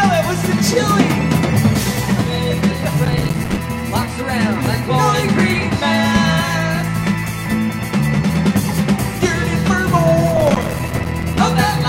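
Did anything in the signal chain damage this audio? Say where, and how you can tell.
Yes. Processor overload crackle occurs at 3.05–3.58 s and 10.31–11.39 s, at the driver/buffer stage. The audio device missed dozens of short deadlines in a row, each leaving a hard-edged gap of silence, consistent with buffers of about 5 ms. On the waveform these show as rapid dropouts to near silence, and on a spectrogram as dense vertical broadband stripes.

A loud pop, two sharp clicks in quick succession, lands between 4.66 and 4.77 s, peaking about 10 dB above the surrounding signal while the sound continues underneath. The likely cause is a voltage transient in the analogue wiring, such as a plug or switch. It appears as two tall spikes on the waveform and two thin full-height lines on a spectrogram.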